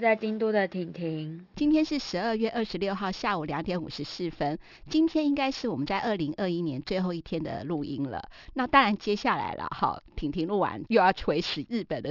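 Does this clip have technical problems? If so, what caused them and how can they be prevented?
Yes, there is aliasing throughout the speech. The content stops hard at 6 kHz, which fits a sample-rate drop from 48 kHz to 12 kHz done without a low-pass filter. Energy that was above 6 kHz folds back below it at wrong pitches, roughly 20 dB under the signal, so sibilants sound gritty and metallic. A spectrogram shows energy packed right up to the 6 kHz edge, with mirrored traces that don't follow the voice's harmonics. To prevent it, apply an anti-aliasing low-pass filter below the new half-rate before downsampling.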